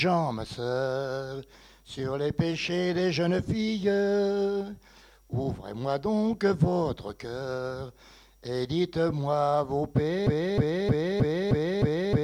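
At 10.27 s the audio locks into a broken-record loop: a fragment of about 0.31 s repeats exactly, back to back, six times through to the end. The player or stream likely stalled and kept resending its last held segment, so the intended audio is lost.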